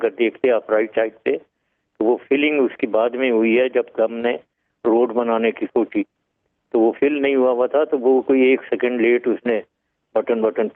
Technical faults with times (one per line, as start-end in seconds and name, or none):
none